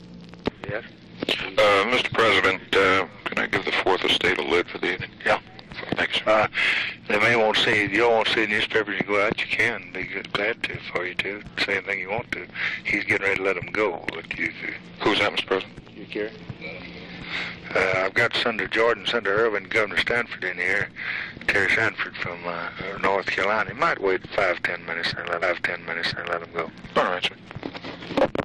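At 25.42 s the audio jumps back with a small blip, and the preceding second plays over again, running to 26.41 s and adding about 1.0 s to the clip. This is a stream segment repeated: the player fetched or queued the same segment twice.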